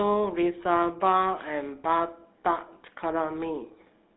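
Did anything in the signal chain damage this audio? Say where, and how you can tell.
Yes, at the codec stage: it's GSM full-rate throughout. The speech sounds buzzy and gravelly, with a phone band of about 200 Hz to 3.7 kHz and nothing above 3.9 kHz. That pulse-driven vocal-tract model throws away fine excitation detail, consistent with 13 kbps.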